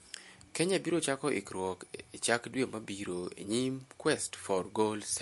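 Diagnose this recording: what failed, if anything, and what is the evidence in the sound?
The codec stage shows damage across the whole speech clip. Nothing remains above 11.3 kHz, and the sound is plainly watery, with smeared consonant attacks. This is likely MP3 compression at a starved bitrate, which fits about 48 kbps. The encoder dropped the treble and zeroed weak frequency lines that flicker between frames.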